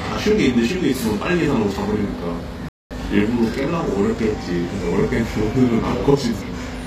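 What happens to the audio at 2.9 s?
At 2.9 s the sound comes back from a playback stall. The output went silent at 2.69 s and stayed dead until 2.91 s, a gap of about 222 ms. The audio then resumes. The likely cause is a player that ran short of data or had its thread blocked. During that time it had nothing to send to the output, so the flow simply stops and then restarts.

A channel delay (doubling) is also present here, as it is throughout the clip. One channel trails the other by 40 ms, and the two are summed to mono. That late copy is heard at equal level as a tight slap just behind each event. Sharp onsets sound doubled rather than clean.

HE-AAC compression damage is also plainly audible at this point. The treble has a gritty, metallic sheen. This fits a low bitrate around 24 kbps. At that rate the upper band is likely rebuilt by copying lower bands upward. Its harmonics then fail to line up with the true top end.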